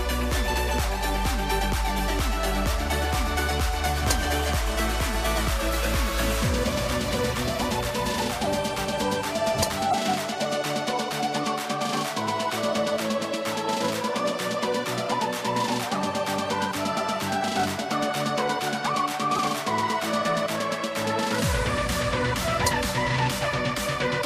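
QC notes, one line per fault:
9.90–9.94 s, corrupt frame decoded. A short blip of about 35 ms peaking near -10 dBFS. Damaged data, likely across a couple of frames, was decoded anyway, throwing energy to wrong frequencies.
15.37–15.42 s, corrupt frame decoded. A quieter chirp of about 52 ms, near -15 dBFS. Flipped bits gave wrong gains across roughly two frames.
19.32–19.40 s, corrupt frame decoded. The longest burst, about 86 ms, peaking near -10 dBFS. It points to roughly four bad frames in a row played as noise.
21.57–21.61 s, corrupt frame decoded. A faint squeak of about 42 ms near -20 dBFS. Misread codes in a couple of frames put energy where none belongs.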